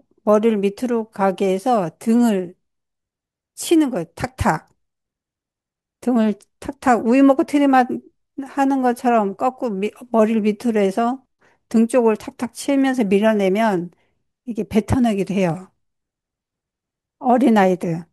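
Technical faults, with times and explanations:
15.50–16.42 s, CD scratch ticks: right near the end of the speech you get a quick run of eight little ticks, each only a few milliseconds long, coming at roughly eight or nine a second. That's a scratch or blemish on the disc passing under the laser once per revolution, wiping out more data than error correction can rebuild, so the player patches or mutes those samples and you hear a regular tick each turn.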